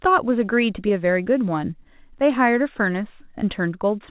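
No faults can be heard anywhere in this speech.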